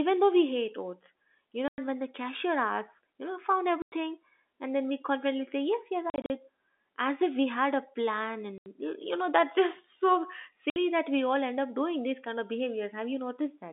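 Hard-edged silent holes chop the speech at 1.68, 3.82, 6.1 (short holes scattered to 6.3), 8.58 and 10.7 s. This is packet loss filled with silence, with gaps of 60 to 120 ms in steps that fit 20 ms packets.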